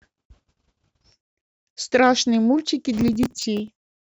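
From 2.98 to 3.95 s the speech carries processor overload crackle: a few dozen short buffers, around 5 ms each, missed their deadlines, each replaced by a stale piece of old audio with hard edges. Unlike a single dropout, it sounds like sustained gritty tearing that stops when the load passes.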